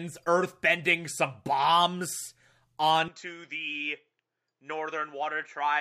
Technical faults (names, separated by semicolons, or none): input switched to a poorer device